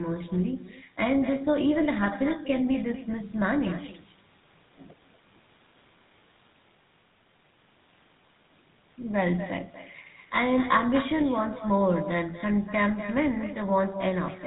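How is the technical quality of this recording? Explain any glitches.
The recording is poor: two faults run through the whole speech clip.

Echo with no canceller: from start to finish, a far-end loudspeaker feeds the microphone and nothing subtracts that path. Every phrase returns roughly a fifth of a second later, about 13 dB quieter, as a thin shadow trailing the speech.

GSM full-rate codec: throughout, the signal passes through the old GSM full-rate coder, which fits a 13 kbps stream. It rebuilds speech from a vocal-tract model driven by sparse, regular pulses and discards everything above 3.8 kHz, so the audio sounds muffled, buzzy and gravelly.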